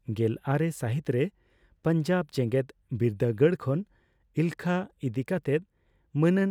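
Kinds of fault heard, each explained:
No technical faults can be heard in this recording.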